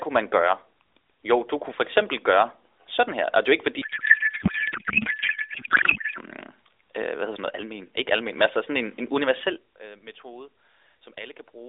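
From 3.82 to 6.19 s the speech collapses into garbled noise and warble that barely tracks it: a codec payload misread, octet-aligned AMR frames being unpacked as bandwidth-efficient, so every field lands in the wrong place. On a spectrogram, speech harmonics give way to smeared, structureless energy capped near 3.7 kHz.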